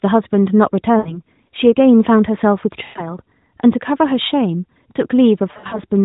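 Lost AMR speech frames: the narrowband decoder fills missing frames by repeating its last good settings at falling gain, so speech stretches and fades. This happens at 0.98 to 1.20 s (80 ms lost), 2.84 to 3.10 s (120 ms), and 5.52 to 5.80 s, where 140 ms of losses scatter over 200 ms in runs up to 60 ms.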